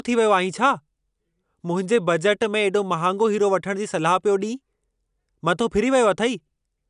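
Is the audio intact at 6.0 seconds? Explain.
Yes, at 6.0 seconds the speech plays through intact, with no dropout, click, distortion or other fault to be heard at that moment.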